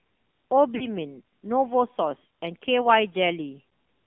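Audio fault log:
throughout: AMR narrowband mobile codec. A low-rate vocal-tract model, consistent with about 7.4 kbps, makes the voice buzzy and synthetic, limited to 200 Hz–3.5 kHz.
0.76–0.87 s and 3.70–3.72 s: lost AMR speech frames. The decoder repeated the last good settings at falling gain for 40 ms, then 20 ms, causing brief warbling dips.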